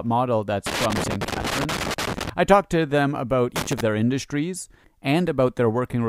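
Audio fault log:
0.66–2.29 s, loose connector crackle: an irregular burst of scratching and crackle runs for about 1.6 s, starting just after "model that's" and clearing before "I talked to them". A worn or dirty contact is making and breaking as it shifts, chopping the signal into fragments, while any DC on the line adds pops.
3.56–3.81 s, loose connector crackle: a shorter flurry of about a quarter of a second, between "talked to them about" and "their industries", from a worn or dirty contact making and breaking again.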